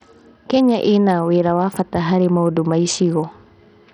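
Throughout the speech, the treble drops out and flickers. A gritty noise and aliasing ride on the sound. This is likely Bluetooth SBC compression. A small bit pool, which fits roughly 64 kbps, starves the upper sub-bands and coarsely quantises the rest.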